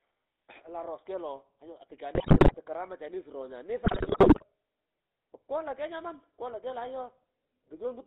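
The whole speech clip carries the buzzy, gravelly roughness of the GSM full-rate codec. The voice is rebuilt from a vocal-tract model fed by sparse regular pulses. That fits 13 kbps coding. The band runs only from 250 Hz to 3.7 kHz. The damage is plainly audible.

GSM bit errors strike from 2.14 to 2.57 s and again from 3.86 to 4.52 s. Corrupted filter, pitch and gain values warp each damaged frame. The voice breaks into squawks, pops and gargling. The first burst has the higher bit error rate.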